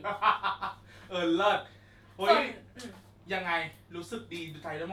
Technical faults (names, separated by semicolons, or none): none